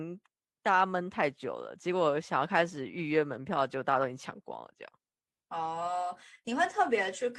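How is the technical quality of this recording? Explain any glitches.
The technical quality holds up, and there are no glitches in the recording to explain.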